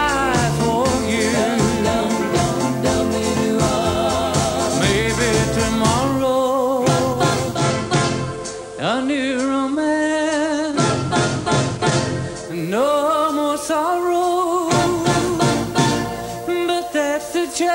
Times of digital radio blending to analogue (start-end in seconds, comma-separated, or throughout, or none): 7.51-12.59